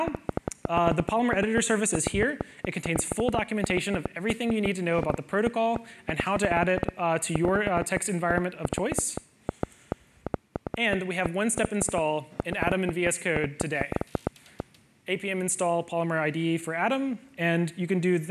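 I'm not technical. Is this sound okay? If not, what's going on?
No. From 0.08 to 14.61 s there is a train of clicks: around a hundred similar ticks, about seven per second at an uneven pace, audible even in pauses. Unlike random crackle, each click sounds alike, which points to likely electrical interference or a faulty connection.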